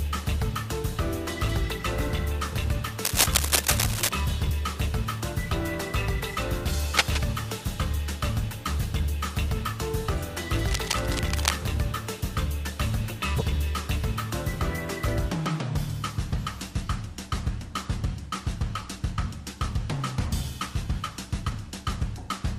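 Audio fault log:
3.05–4.09 s, 6.97–7.23 s, 10.68–11.58 s: cable scratch noise. Rustling, scratchy bursts, likely from an intermittent contact being moved. They start about 5 dB above the sound and fall to about 5 dB below it by the last burst. On a spectrogram they appear as dense, irregular broadband streaks.
13.38–13.42 s: compressed frames skipped. Around 50 ms of audio is missing, so the sound jumps forward.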